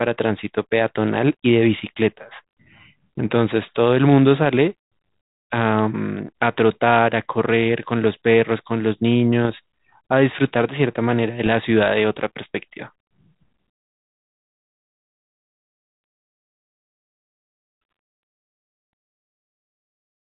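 At 9.45 to 9.55 s and 11.46 to 11.50 s, bit errors on an ADPCM link produce short pops and rough bursts with brief level jumps. Each flipped bit knocks the decoder's step size and predictor off track, so the disturbance rings on briefly, over light G.726 coding consistent with 32 kbit/s.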